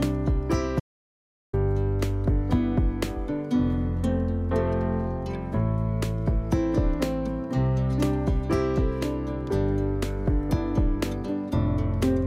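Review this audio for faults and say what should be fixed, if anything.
An audio dropout to silence runs from 0.80 s to 1.53 s, about 0.73 s of sound lost, with no room tone left in the gap. The likely cause is a brief loss of input, from a loose connection or momentary mute, while recording continued writing zeros. On a waveform it shows as a flat, near-silent stretch, and on a spectrogram as a fully blank vertical band with hard edges. To prevent it, secure cables and interface connections and monitor input levels live during recording.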